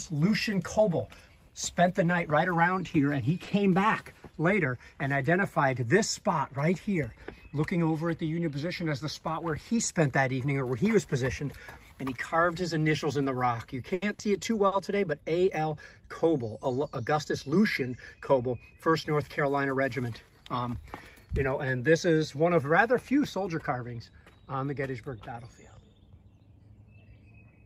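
Late packets twice left the jitter buffer empty, producing a short stall from a late packet at 3.43–3.49 s and again at 4.18–4.25 s. In each case the receiver stretched the last sound for about 30 ms and then 40 ms until the packet arrived, so nothing drops out but the audio hangs briefly with a faint buzz or dip. Between 13.94 and 14.75 s, repeated packet loss produces a robotic sound. Three gaps are patched by extending the preceding audio, covering about 22 percent of that stretch, with the longest gap 80 ms. The result is choppy, with around 60 ms actually lost. A jitter buffer speed-up follows. From 14.76 to 15.22 s the receiver trims tiny pitch-period slices to run at 107 percent, shedding around 40 ms. It does the same more gently from 17.48 to 19.77 s at 102 percent, removing roughly 70 ms. The first passage sounds hurried at unchanged pitch.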